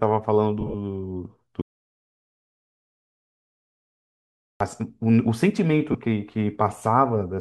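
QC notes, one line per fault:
0.61–0.75 s and 5.92 s, lost LE Audio frames: the speech briefly turns into a grainy, noisy smear rather than going quiet. In the first burst about 90 ms is missing, scattered over 135 ms, with the longest gap around 30 ms. The second loses 22.5 ms, which fits three 7.5 ms frames. The LC3 decoder covers each gap by replaying the last spectrum with randomised signs. The runs are too short for that concealment to fade toward silence, which is what separates them from a true dropout. The codec itself is likely working, with only a light grain.
1.61–4.60 s, audio dropout to silence: the speech cuts off abruptly and returns mid-flow after about 3 s of silence, with no room tone and no decay. Concealment of lost frames would fill the gap with a smear that fades gradually. Here the signal drops straight to silence and stays there, so the input itself was gone. The likely cause is a disconnected device or failed link while the encoder kept writing silence.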